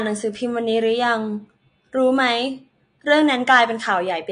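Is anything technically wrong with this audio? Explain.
Yes: likely AAC compression at a low bitrate, around 32 kbps, throughout, leaving nothing above 9.8 kHz and a dull, smeared speech sound with a fizzy, warbling texture.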